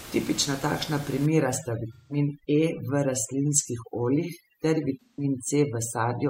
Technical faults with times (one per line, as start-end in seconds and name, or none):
1.26-6.29 overdone noise removal
1.93-2.16 AAC frame loss with concealment
5.01-5.24 AAC frame loss with concealment